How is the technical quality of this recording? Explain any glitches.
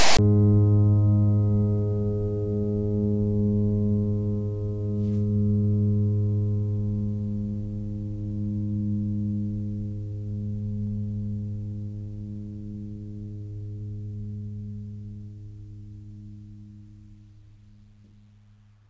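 The music has one glitch, right at the start.

From 0.00 to 0.19 s, file tags are played as audio. Text tag bytes decoded as samples give a harsh, one-sided rasp, then zero padding drops to silence. On the waveform this is a hard-edged, offset block, and on the spectrogram it is a broadband smear.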